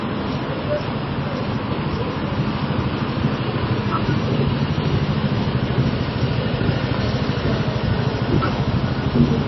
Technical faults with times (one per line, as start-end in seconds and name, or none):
0.00-9.47 MP3 compression